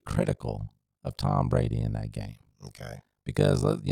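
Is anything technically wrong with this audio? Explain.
Yes. Throughout the speech there is overlap-add ripple. The audio was split into windowed frames and reassembled with an overlap whose windows do not add up to a steady gain, so the level dips and recovers once per frame, around fifty times a second. The dips are very deep, about 60 dB, so the sound is nearly chopped on and off at that rate. It comes across as a harsh, buzzy flutter, a robotic tremolo over every syllable.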